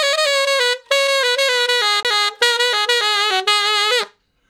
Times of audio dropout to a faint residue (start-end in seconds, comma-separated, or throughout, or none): none